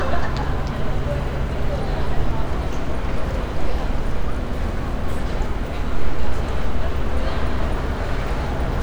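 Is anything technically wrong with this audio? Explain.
No, nothing is technically wrong with this audio.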